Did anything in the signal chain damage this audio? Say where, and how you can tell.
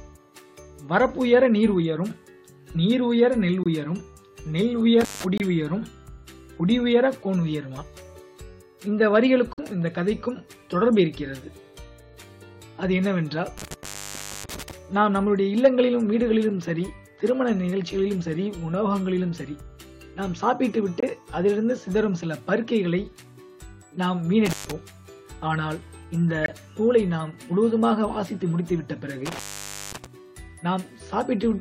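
Yes. At the codec stage there are corrupt frame mutes: abrupt silent holes at 3.63–3.67, 5.38–5.43, 9.53–9.60, 21.00–21.04 and 26.44–26.49 s, each one to three frames long. The decoder rejected the damaged frames and the player substituted silence, with timing kept intact.

In the analogue wiring there is an intermittent contact at 5.01–5.24, 13.58–14.71, 24.46–24.72 and 29.25–30.06 s. Each dropout is bracketed by crackle, and the line stays open for about 158, 596, 121 and 535 ms respectively. That points to a loose plug or cable briefly breaking the connection.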